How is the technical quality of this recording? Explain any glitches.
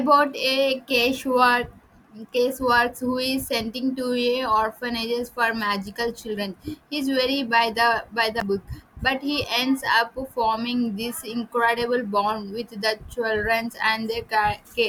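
The speech has one glitch, a very short dropout at 8.40 s. It is most likely a Bluetooth stall: radio interference delayed packets on the wireless link, the receiving device's buffer ran empty, and playback paused until the retransmitted data arrived. The audio cuts to silence for about 11 ms and then resumes.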